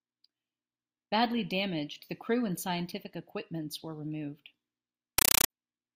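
From 5.18 to 5.50 s, a compressed stream is played as audio: 8 ms noise bursts repeat steadily at 31.25 Hz, fitting undecoded AC-3, unlike random digital crackle.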